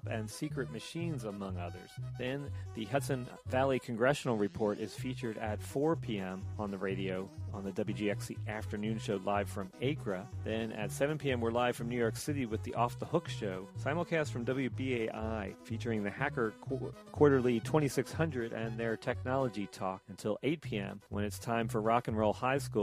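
No technical faults can be heard anywhere in the recording. There is no event here that needs a time or an explanation.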